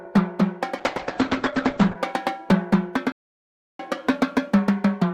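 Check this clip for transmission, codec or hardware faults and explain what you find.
Two faults are audible: a call bitrate drop and a playback stall.

The call bitrate drop runs from 0.79 to 2.03 s. The link's bandwidth estimate collapsed, so the encoder was pushed from 96 kbps down to 9 kbps and held at the bottom for about 1.17 s. At that rate it quantises far more coarsely and narrows the coded band from 20 kHz to 8 kHz. The sound turns muffled and rough, with a watery texture, until full quality returns.

The playback stall runs from 3.12 to 3.79 s, a gap of about 673 ms. The audio cuts out mid-flow and the output falls completely silent, then resumes. The likely cause is the player running out of buffered data or its output thread being blocked, so nothing reached the device until it caught up.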